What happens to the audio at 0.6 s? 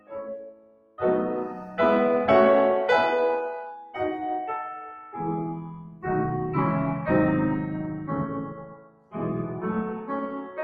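A speech-tuned noise suppressor is left running on this music, and at 0.6 s it is in the middle of a stretch, from 0.0 to 1.0 s, where it treats the music itself as noise. This is sound cut by the noise suppressor: it pulls the level down by as much as about 18 dB here, so the held material sinks and its decay is clipped short while only the sharper onsets hold their level.

Because this noise suppressor, applied to music, stays active for the entire clip, its gain keeps swinging by roughly 15 dB as it decides from moment to moment what counts as noise. Around 0.6 s the sound pumps and thins out rather than sustaining, and the ambience and tails that should surround each attack are turned down.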